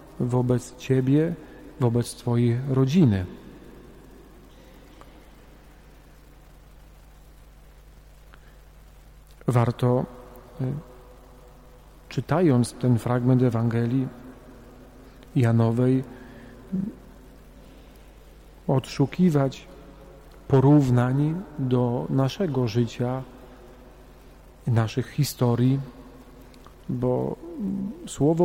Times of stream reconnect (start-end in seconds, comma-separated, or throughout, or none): none